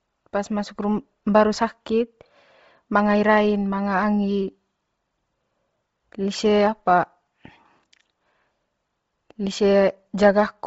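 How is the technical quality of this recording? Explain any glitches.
Quality takes a clear hit from codec damage across the whole recording. Throughout, the speech has a breathy, grainy edge and nothing above about 7.7 kHz. That's likely Bluetooth LC3 compression at a low bitrate, consistent with 24 kbps. The codec discards much of the upper spectrum and fills it with noise, and the artefacts fit short 7.5 ms frames.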